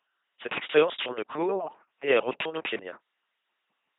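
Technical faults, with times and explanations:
Throughout, LPC-10 vocoder: the speech has been reduced to a crude model in which a filter of about ten poles shapes either a buzzing pulse train or plain noise, with each moment forced to be fully voiced or fully unvoiced. The heavy damage fits the 2.4 kbit/s rate of that coder. The result is a flat, mechanical robot voice, with buzz and hiss swapping wherever the voicing choice misfires, and nothing above 3.8 kHz.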